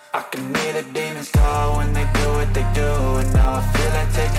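Between 2.98 and 3.68 s the audio carries four CD scratch ticks, each a brief click lasting well under a millisecond. Their even spacing, roughly four per second, is what separates them from vinyl crackle or random digital clicks. A scratch on the disc corrupts more data than error correction can restore, once per revolution. The player then briefly conceals or mutes the damaged samples, producing a tick with every turn.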